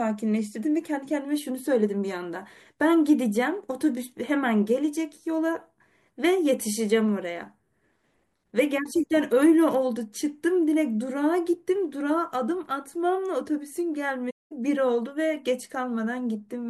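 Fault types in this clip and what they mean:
AAC frame loss with muting: lost frames were decoded as silence, leaving a soft-edged gap of about 0.21 s near 14.30 s, faded by overlapping windows.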